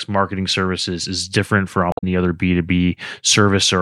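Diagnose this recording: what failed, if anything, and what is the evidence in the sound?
Just after "services is different for", from 1.90 to 2.04 s, the speech gives way to a short glitch of about 0.14 s. This is damaged data in a compressed stream, at the codec and storage stage. Bytes in that stretch of the file were lost or corrupted, so the decoder misread the frames there, lost sync and searched for the next valid frame header before clean audio resumed.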